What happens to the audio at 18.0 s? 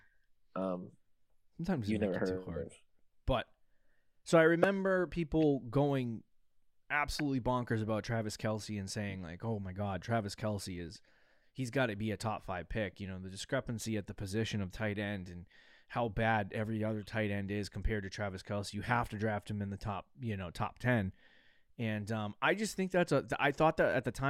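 At 18.0 s the speech carries on cleanly, with no dropout, click or other fault.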